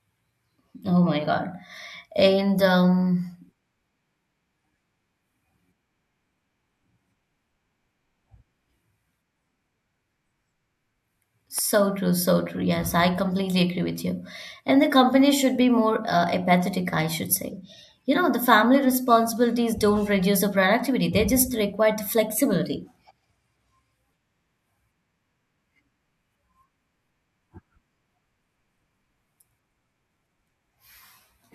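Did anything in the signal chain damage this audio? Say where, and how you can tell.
Yes. At 11.59 s a single loud pop cuts through the speech, a sharp click standing a few decibels above it while the talking continues underneath. The likely cause is a sudden voltage step in the analogue wiring, such as a plug, switch or static discharge.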